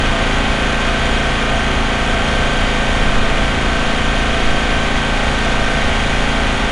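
Throughout, the sound carries 4-bit ADPCM compression: a gritty hiss riding on loud passages, plainly audible, with a spectrogram showing level-following noise and nothing above 10.7 kHz.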